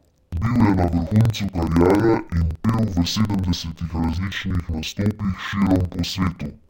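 From start to finish the speech plays an octave low yet at its normal pace, the mark of interleaved audio read as planar. Each block of about 46 ms, which fits a 2048-sample block, is split so one half becomes left and the other right, and both play at half speed. The result sounds doubled and choppy, stuttering at about 21.5 Hz. Simple slowed playback would also drag the timing, and a clean pitch shift would not chop.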